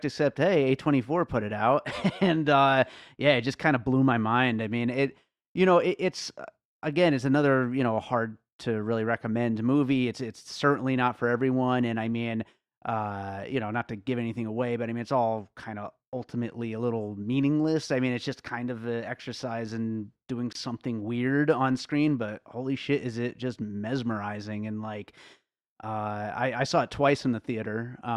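A gap at a join of encoded pieces opens in this speech clip from 20.53 to 20.55 s, a silence of about 27 ms with smeared edges. The pieces were encoded separately, and each run's start-up delay and last-frame padding were left in when they were spliced.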